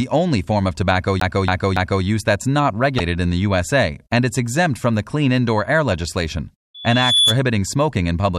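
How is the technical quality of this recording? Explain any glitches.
The recording has three distinct glitches: a disc skip, a codec dropout and a burst of feedback.

From 1.20 to 2.04 s, right after "only form of tobacco", a CD stuck on one turn makes the laser jump back to the same spot with each rotation. A 0.28 s stretch of speech repeats three times, with a tiny mute at every jump, giving a rapid, even stutter before "that's not" continues.

From 2.97 to 3.00 s, between "that's not" and "in the", the likely cause is a broken MP3 bit reservoir. Missing frames leave the next frame pulling its data from the wrong bytes, so the audio lurches forward through a brief disruption about one 26 ms MP3 frame long.

From 6.74 to 7.38 s, a loudspeaker feedback squeal sets in. The microphone picks up its own speaker output, and the loop gain at 3.4 kHz exceeds one. The tone swells over roughly 0.4 s into a piercing whistle, reaching about 5 dB above the speech.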